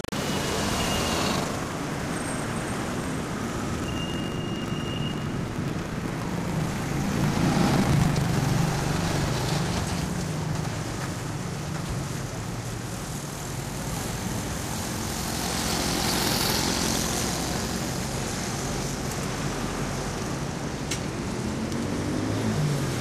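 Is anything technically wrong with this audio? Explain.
Yes. From 0.0 to 9.3 s these everyday sounds carry buffer tearing: playback and the writing program have slipped, so about half of each 40 ms buffer replays audio roughly a tenth of a second old. Hard joins produce a 25 Hz robotic rattle, seen as regular vertical splice lines on a spectrogram and abrupt waveform discontinuities.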